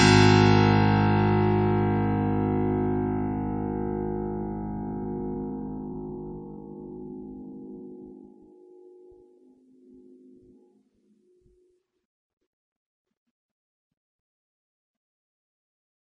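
Throughout the music, the treble stops abruptly, and the remaining content has a watery, swirling quality, with metallic chirping on bright transients and smeared attacks. This is most likely heavy MP3 compression. The damage points to a very low bitrate, around 32 kbps. With so few bits, the encoder discards everything above the cut-off and drops weak frequency components that flicker on and off from frame to frame.

From 5.02 s to 8.60 s, the pace jumps to about 1.43 times normal speed while the pitch stays unchanged, then returns to normal at the end of the section. This points to a time-stretched section, likely software compressing that stretch to fit a shorter length by discarding short pieces of audio. The result sounds rushed.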